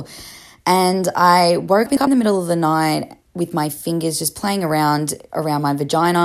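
It's a speech clip with frames out of order between 1.86 and 2.07 s, right after "I woke" and before "the middle of the". Two roughly 105 ms chunks, each fitting a run of four frames, got swapped, so you hear a garbled flutter, though no time goes missing.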